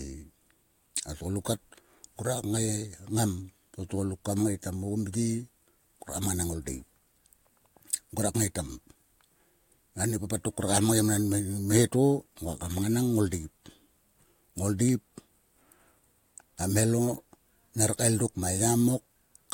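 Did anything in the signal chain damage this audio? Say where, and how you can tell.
No, nothing in the signal chain damaged this audio.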